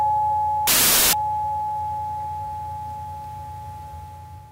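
From 0.67 to 1.13 s the player runs into file tags played as audio: an embedded cover picture, stored as compressed image data, is handed to the output as if it were sample values. Because compressed bytes are essentially random, the result is about 0.46 s of very loud white noise, a harsh hiss that cuts in and out abruptly, with hard edges and no fade, sitting in the sound like a burst of static.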